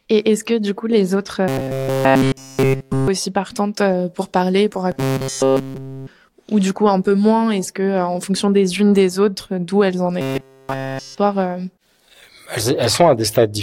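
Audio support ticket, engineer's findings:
Robotic sound from repeated short buffers at 1.48–3.08 s after "du coup les autres", 4.92–6.07 s after "euh pour parler pour", and 10.21–11.18 s after "autres d'où elles en". A rigid metallic buzz at 134 Hz replaces nearly all the audio. A roughly 7.5 ms chunk loops while incoming audio is skipped, likely from a buffer underrun in the playback path.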